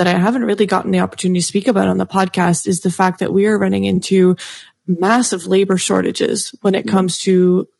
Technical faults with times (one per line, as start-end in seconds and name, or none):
0.00-7.79 low-delay AAC compression
3.95-3.99 AAC frame loss with concealment